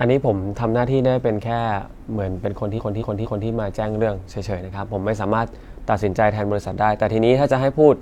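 From 2.74 to 3.44 s, repeated frames: a 232 ms block of speech plays three extra times as a stutter, adding about 0.7 s, which fits duplicated compressed frames.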